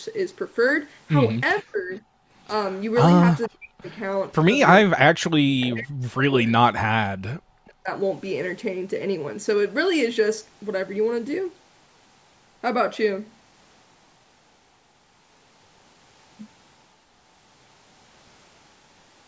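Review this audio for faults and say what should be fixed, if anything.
Echo leak appears at 1.56 to 1.63 s and 3.41 to 3.49 s as a faint delayed copy of the sound, 464 ms behind the original and about 30 dB and about 20 dB below it. This is likely a loudspeaker-side echo canceller letting residual pickup return. The fixed delay distinguishes it from room reverberation.

Speech suppressed in double talk follows the first two leaks and recurs later: 1.62 to 1.91 s, 3.48 to 3.91 s, 4.9 to 7.1 s and 7.41 to 7.89 s. The level plunges by roughly 40 dB, likely because the canceller confused the talker with echo while both sides spoke. It is longer and deeper than background gating.

Background gated by the echo canceller hits only the room sound, at 2.19 to 2.28 s, for about a tenth of a second. The ambience dips by about 16 dB, then returns when the canceller releases. That it spares speech distinguishes it from double-talk suppression.

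Fixing these would mean improving the echo canceller's adaptation and double-talk detection, or using a headset to remove loudspeaker pickup.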